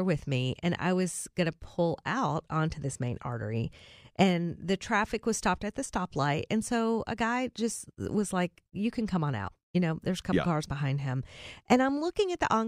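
At 5.11 s, between "main artery and the" and "was stopped at the", there is a single sharp click. This is dropped samples. A tiny run of samples, only a handful, is missing. The waveform jumps abruptly. That likely causes the brief broadband tick.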